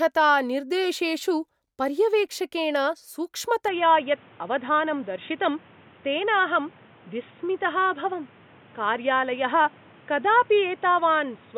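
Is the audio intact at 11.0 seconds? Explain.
No. At 11.0 s the speech is still inside a stretch that began at 3.68 s and runs to the end, where the input likely switched to a poorer device. Nothing comes through above 3.8 kHz, so it sounds dull and boxy, with a new noise floor roughly 30 dB down.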